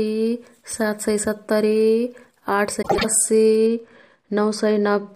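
From 2.82 to 3.05 s, frames out of order: two adjacent blocks of about 78 ms, which fits three frames each, were decoded swapped, so the speech flutters. A waveform shows abrupt discontinuities there, and a spectrogram shows mismatched, misplaced formant segments.

From 3.66 s to the end, de-emphasis applied wrongly: a treble cut was applied that the audio did not need, either with no pre-emphasis to undo or a second time, falling to about 11 dB down at 10 kHz relative to 1 kHz. The speech sounds dull and muffled, and a spectrogram shows the upper bands fading smoothly.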